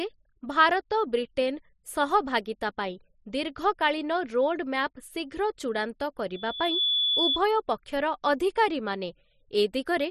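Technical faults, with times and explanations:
6.34 to 7.40 s, loudspeaker feedback squeal: a single tone near 3.4 kHz swells over about half a second until it is roughly as loud as the speech, then stops at 7.40 s. The microphone is picking up the loudspeaker it feeds, and at this one frequency the loop's gain exceeds one, so the tone feeds on itself. Its growth from nothing sets it apart from a steady interfering tone or hum, and it builds rather than fading away like a decaying room resonance.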